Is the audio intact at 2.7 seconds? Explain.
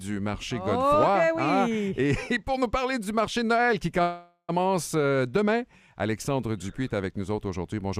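Yes, the audio at 2.7 seconds is intact, with no dropout, click, distortion or other fault audible at that point.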